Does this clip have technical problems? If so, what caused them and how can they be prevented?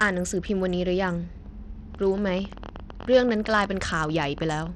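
Yes. Throughout the speech the treble sounds dull and flickers in and out, with a gritty grain over everything. This is likely Bluetooth SBC compression, which fits a bitrate around 80 kbps, leaving the top sub-bands with too few bits. Record over a wired connection or a higher-quality codec to prevent it.

From 1.95 to 4.68 s, a train of clicks ticks over the speech at about 12 per second, unevenly spaced, around thirty in all, peaking a few dB above the voice. Interference or a faulty connection injecting pulses is the likely cause. Shield cables and keep interfering equipment away to prevent it.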